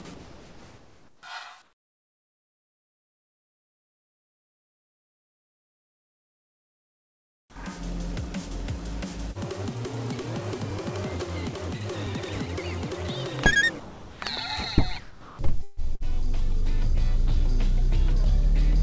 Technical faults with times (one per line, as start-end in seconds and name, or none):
0.02-1.23 sound dropped by the voice detector
1.62-7.56 comfort noise in place of the background
7.44-7.56 onset clipped by the voice detector
13.80-14.22 sound dropped by the voice detector
15.00-15.39 sound dropped by the voice detector
15.63-16.03 burst of packet loss